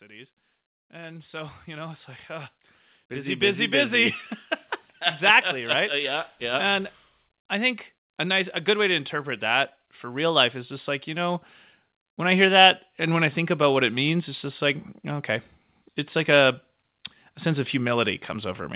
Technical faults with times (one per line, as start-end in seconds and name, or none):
0.90-4.23 automatic gain rising
5.54-11.45 automatic gain rising
12.03-15.39 automatic gain rising